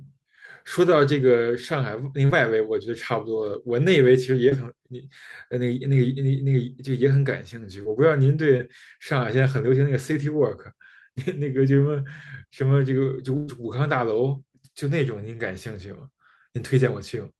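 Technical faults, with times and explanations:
2.25, 4.49, 7.83 and 8.57 s: short concealed packet loss. About 40 ms of speech is lost at 2.25 s and 20 ms at each of the others. The receiver bridged each hole by extending the preceding sound, then blended back, so each spot is a brief smear or wobble.
13.37 to 13.49 s: burst of packet loss. About 100 ms of speech never arrived in time. The receiver stretched the last sound across the gap and let it fade, with no silence. It is a held, dying continuation, and speech resumes with that stretch missing.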